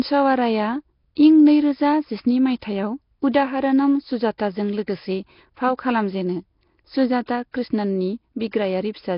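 Nellymoser compression runs through the whole speech clip: everything above 5.3 kHz is gone, and the voice carries a rough, hissy halo with a smeared, underwater quality. The likely cause is the Flash-era Nellymoser Asao codec, which leaves weak bands empty and fills them with noise, and the heavy damage fits a bitrate near 22 kbps. Pre-echo appears at 4.38 s, just before "लोगोसे फाव खालामजेनो", and again at 7.26–7.28 s, 7.52–7.54 s and 8.51–8.53 s. Each time a short hiss of 15 to 27 ms comes just ahead of a sharp onset. The codec spreads its noise across the whole block, so noise sized for the loud attack also fills the quiet moment before it, leaving the onset soft.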